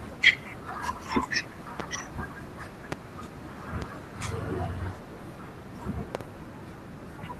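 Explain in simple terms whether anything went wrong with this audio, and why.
Loud pops strike at 1.80–1.82 s, 2.92–2.95 s, 3.82–3.85 s and 6.15–6.23 s, the last a quick double pop. Each is likely a sudden electrical jolt, from a plug, switch or static, landing on top of the speech, which carries on underneath.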